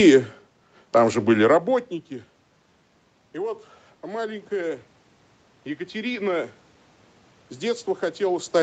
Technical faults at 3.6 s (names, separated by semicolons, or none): automatic gain rising